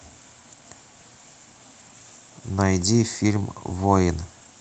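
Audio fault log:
No faults detected in clip.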